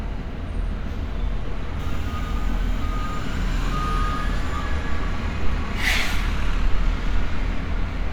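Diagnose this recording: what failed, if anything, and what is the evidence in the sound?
The codec stage failed: compressed frames were skipped, either missing from the file or rejected by the decoder as damaged. Playback jumps forward at 0.44, 1.78, 2.81, 5.75 and 7.59 s, losing roughly a fifth of a second each time, nearer a third at 1.78 s and closer to a sixth at 2.81 s. Each join is followed by audio that has visibly moved ahead.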